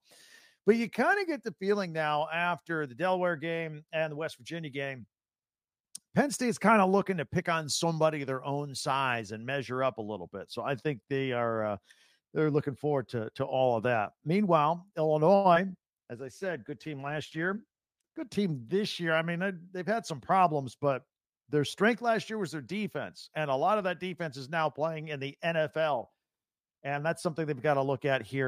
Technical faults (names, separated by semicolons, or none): short stall from a late packet; short concealed packet loss; call bitrate drop; jitter buffer speed-up